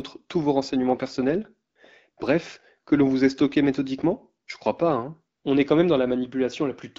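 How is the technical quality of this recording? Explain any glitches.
It's wideband phone-call speech, with the clarity you'd expect from AMR-WB at around 12.65 kbit/s, and it has one recurring glitch: AMR comfort noise. It cuts in at 1.69 to 1.75 s, 2.11 to 2.17 s, 4.45 to 4.47 s and 5.37 to 5.43 s, mostly for about 60 ms and once for 20 ms. Each time the handset decided nobody was talking and stopped sending speech frames. The far end then filled the gap with synthetic hiss built from a rough level-and-spectrum sketch. You hear the real background briefly swap for a smooth, steady wash that switches in and out.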